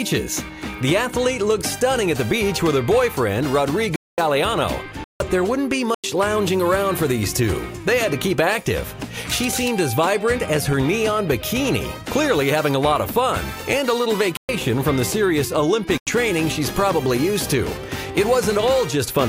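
At 3.96 s, 5.04 s, 5.94 s, 14.37 s and 15.98 s the sound drops into a block of digital silence, cutting out and back with no fade. The gaps run 90 to 220 ms, and the two 93 ms ones fit a 4096-sample buffer that wasn't filled in time.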